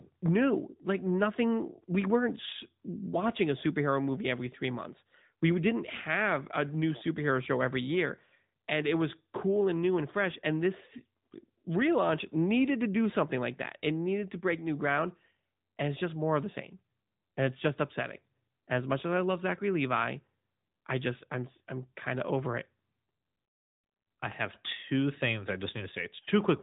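Speech squeezed through the AMR narrowband mobile codec for the whole clip: nothing gets above 4 kHz, so it's thin and boxy, and the vocal-tract modelling leaves a plainly audible buzzy, synthetic edge that fits a mid-rate mode around 10.2 kbps.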